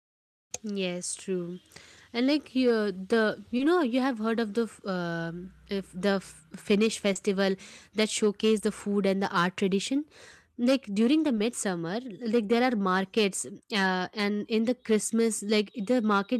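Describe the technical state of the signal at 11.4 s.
At 11.4 s there is a short concealed packet loss, running from about 11.35 to 11.39 s. About 20 ms of the speech never reached the decoder in time. The receiver covered the gap with 20 ms of invented audio, extending the last sound it had received. It then blended back into the real signal. The result is a brief smear or wobble in the speech, heard as a momentary blur.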